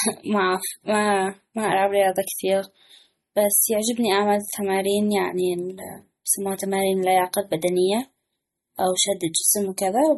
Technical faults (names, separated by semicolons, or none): MP3 compression